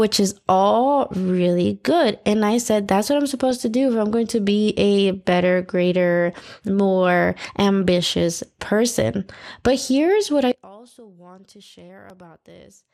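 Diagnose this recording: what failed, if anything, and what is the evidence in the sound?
The codec stage shows damage for the whole 13 seconds. The speech sounds dull and carries a gurgling, granular roughness, most likely from MP2 compression at a rate that fits about 80 kbps. Layer II splits the signal into 32 sub-bands and shares a tight bit budget among them, so upper bands get switched off and the bands that remain are coarsely quantised. On a spectrogram the top end is cut off in ragged, flickering blocks rather than along a smooth roll-off.

Transmission errors, DAB burbling, show up as a brief burst at 3.51 s and a longer one from 8.38 to 8.47 s. A small fraction of a percent of bits got past error correction into the MP2 data. The corrupted samples put short blips of noise in single sub-bands. A spectrogram shows isolated horizontal bricks of energy at wrong levels, frame-long and sub-band-wide, sitting on top of the speech.

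From 10.52 s to the end, the mono sum drops by about 25 dB. The centred speech nearly vanishes, leaving only a faint residue. The likely cause is one channel inverted, in wiring or in the playback path. With reversed polarity, everything common to both channels cancels when they are summed. On a waveform the summed trace collapses to a thin line in that span.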